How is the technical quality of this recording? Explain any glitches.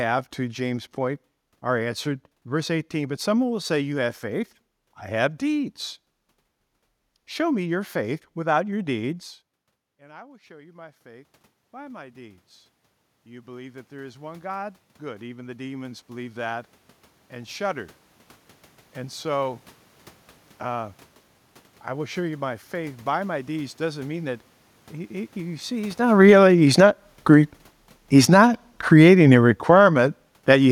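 Two automatic gain control faults affect the recording, each triggered when the talker's distance from the microphone changed.

Automatic gain rising, 9.84 to 19.31 s: Around 9 s the talker moves back and the level at the microphone drops by about 24 dB. The gain control responds by raising its gain by about 19 dB, but it takes roughly nine and a half seconds to do so. The voice first sounds distant, then slowly climbs, and the room noise swells up along with it.

Automatic gain falling, 26.0 to 30.66 s: At about 26 s the talker moves relative to the microphone. The gain control then lowers its gain by about 11 dB over the next four and a half seconds. The voice sinks steadily toward the end of the clip, with the room background fading down at the same rate.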